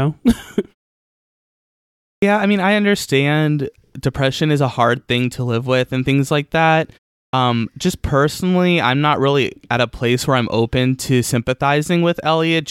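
Clipped start after a pause at 2.16 s and 7.27 s in this speech clip: about 63 ms is swallowed each time, so "I mean I understand" and, after "and things like that", "just personally I'm not" begin abruptly without their opening sounds. The output device drops into a low-power or unlocked state during silence (1.5 s and 0.37 s here) and needs that moment to wake before audio passes again.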